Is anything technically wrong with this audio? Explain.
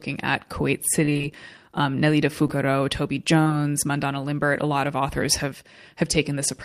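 Yes, the speech has two kinds of fault.

From 1.05 to 1.25 s there is repeated packet loss, giving a robotic sound. Audio failed to arrive again and again across this fifth of a second. Each hole, the longest about 28 ms, was patched by extending the preceding sound, so half the stretch is synthetic fill. It sounds choppy. A spectrogram shows smeared, repeated harmonic slices, and the waveform shows a rapid stutter of copied cycles.

There is short concealed packet loss at 2.47 to 2.50 s, and again at 3.44 to 3.48 and 3.48 to 3.52 s, two back-to-back holes. Each time about 20 ms of audio went missing and the receiver bridged it by continuing the last sound, then faded back into the real signal. This is heard as a brief smear or wobble, and a quick consonant may disappear. On a spectrogram, detail flattens into a short repeated or noise-like patch. The waveform shows a cycle-copied segment with a soft seam.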